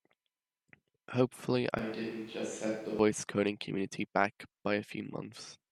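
From 1.79 s to 2.99 s the speech turns abruptly roomy and hollow, thinner in the bass and about 5 dB quieter, with room noise roughly 25 dB below the speech. This is likely a switch to a distant microphone; the close pickup returns just before "coding community back".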